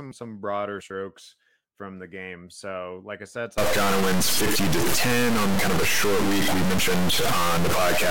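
From 3.58 s, just after "like I said", the speech turns harsh and buzzy. This is a stuck bit, likely one data line or converter bit held fixed. About half the samples jump by roughly -15 dBFS, so pauses fill with loud noise.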